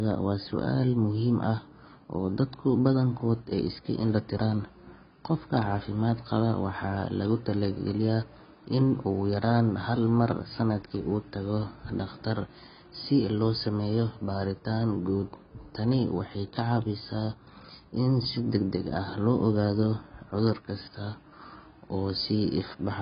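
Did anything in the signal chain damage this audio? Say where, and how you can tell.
Yes. The codec stage was likely a heavily starved AAC compression pass, consistent with AAC-LC at around 16 kbps. Throughout the speech nothing survives above 5.1 kHz, and the coarse spectral quantisation leaves the sound dull and smeared, with warbling, fizzy sibilants.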